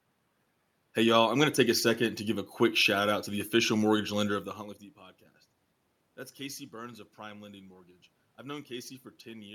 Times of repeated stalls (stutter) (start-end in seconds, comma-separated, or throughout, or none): none